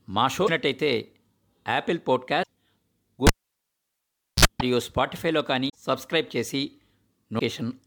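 A cable pulled and plugged in runs from 3.27 to 4.45 s. A pop opens a gap of about 1.13 s of near silence. Then comes a 51 ms burst of 60 Hz mains buzz as only the plug's tip makes contact, and a second pop as the speech returns.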